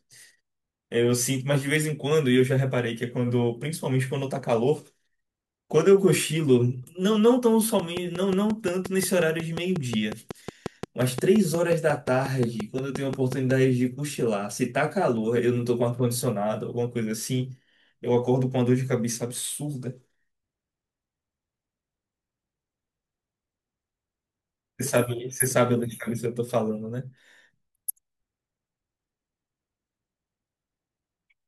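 Something in the recording chain was likely injecting a repeating pulse, such as interference from nearby equipment or a faulty connection or power supply, and in this speech clip it produces a train of clicks from 7.80 to 13.52 s. About thirty clicks of much the same shape arrive at a steady 5.6 per second, each standing out by around 10 dB above the speech, so they are heard as regular ticking laid over the talking and through the pauses.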